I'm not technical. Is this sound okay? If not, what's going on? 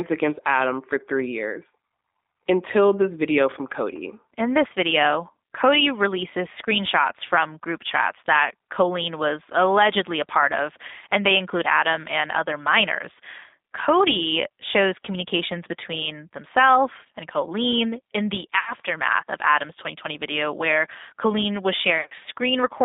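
No. The whole call went through the G.729 codec, a phone system that squeezes speech into very little data by rebuilding it from a rough model of the voice. It keeps only sound between about 250 Hz and 3.7 kHz, so the speech sounds thin, slightly rough and a bit artificial throughout.

There is also VoIP packet loss concealed by the speech codec. Pieces of the call went missing in transit, from 18.59 to 18.73 s and again, in scattered bits, from 22.01 to 22.13 s. The phone filled each gap by stretching the last sound it had, so you hear a brief buzzy or smeared fade instead of clean speech.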